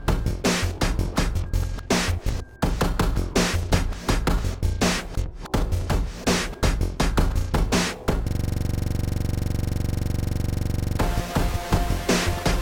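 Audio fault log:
8.28–10.99 s, system hang loop: a rapid, rattling stutter, one 42.67 ms scrap repeating exactly about 63 times at 23.4 Hz. The system froze while the audio hardware kept cycling the same ring buffer, which fits a 2048-sample buffer.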